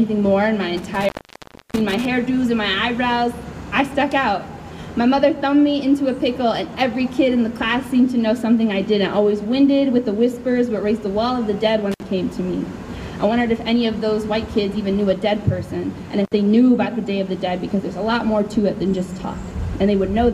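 From 0.77 to 2.05 s, then at 11.92 to 12.03 s and 16.25 to 16.33 s, the sound cuts out in an intermittent contact fault: a loose cable or plug briefly breaks the connection, open for about 0.65 s in the first event and roughly 60 ms in the later two. Unlike a digital dropout's clean silence, each break carries crackle where the contact scrapes open and shut, with faint hiss remaining while the line is open.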